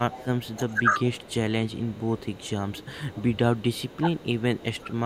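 From 0.05 to 1.53 s the speech dips by up to about 15 dB in patches totalling well over half a second: speech suppressed in double talk, likely an echo canceller ducking both talkers. Meanwhile, 0.11 to 1.31 s, an echo leak adds a copy delayed 359 ms at about 15 dB down, likely from residual loudspeaker pickup. It continues fainter, about 25 dB down, from 1.7 to 4.79 s. Shorter suppression dips follow at 2.02–2.15 s (slight), 2.88–3.09 s, 3.99–4.18 s and 4.77 s to the end.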